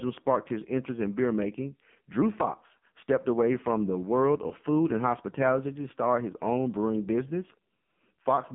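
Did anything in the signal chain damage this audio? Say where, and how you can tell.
Yes. AMR narrowband mobile codec, throughout, at the codec stage. The whole clip sits in a telephone band of roughly 150 Hz to 3.5 kHz, with nothing above 4 kHz. The speech is heavily damaged: buzzy and synthetic. That fits a low-rate AMR-NB mode around 5.9 kbps. The encoder rebuilds each frame from a coarse vocal-tract filter excited by only a few pulses, so fine detail becomes artificial buzz.

Lost AMR speech frames, at about 4.48 to 4.52 s, between "away from the world" and "food and hospitality to", at the network stage. There is one brief dip and warble of about 20 ms, which points to a single frame failing its checksum after a radio error. The decoder filled the gap by reusing the previous frame's pitch and vocal-tract settings at reduced gain, which gives the short smeared blip before normal decoding resumes.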